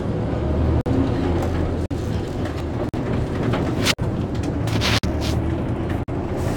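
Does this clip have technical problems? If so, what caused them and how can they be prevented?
Yes. The most obvious problem is gap between chunks. The audio was delivered in 1.0-second blocks, and something in the chain, such as codec padding or a player that starts each block late, left about 48 ms of silence at every join. No sound is lost, but it is cut off by hard-edged holes at 0.81, 1.86, 2.89, 3.94, 4.99 and 6.03 s, a steady once-per-second stutter. To prevent this, strip codec padding and schedule each chunk to start exactly where the previous one ends.

There is also a single overlap between stream segments at 2.60 s. The time stamps of two segments, which fit 6-second segments, claimed a short stretch of the same time. The player trimmed that stretch even though the sound was not actually duplicated, so a few milliseconds went missing and the waveform jumped, producing a brief click or tiny skip. 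To prevent this, generate segment time stamps from a continuous sample count so that neighbouring segments never overlap.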